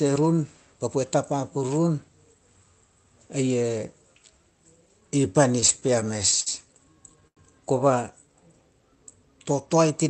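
From 5.60 to 6.48 s the speech stutters: repeated stalls (stutter), where packets kept arriving late and the jitter buffer ran dry nine times in under a second. Each gap is bridged by continuing the last sound, about 139 ms in all, the longest near 61 ms. Nothing is lost, so this is dragging rather than dropout.

Between 7.27 and 7.39 s comes a single short stall from a late packet. One packet missed its slot, and the receiver held the preceding sound for about 90 ms before resuming where it left off. It is one stretched moment with a slight buzz or dip, not a run of hitches.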